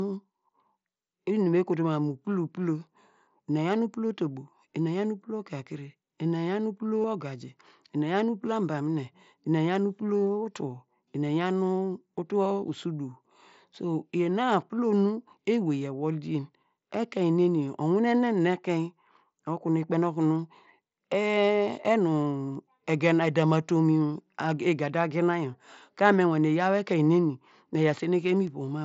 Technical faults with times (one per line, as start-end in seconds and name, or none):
7.02-7.04 concealed Bluetooth headset packet loss
11.28 concealed Bluetooth headset packet loss
21.45 concealed Bluetooth headset packet loss